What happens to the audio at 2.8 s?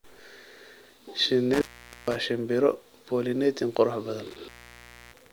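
Nothing goes wrong at 2.8 s; the speech continues intact through that moment.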